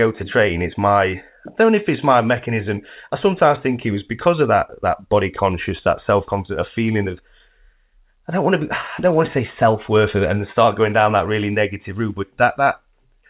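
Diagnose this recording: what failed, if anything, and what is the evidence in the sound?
Nothing failed; no faults heard.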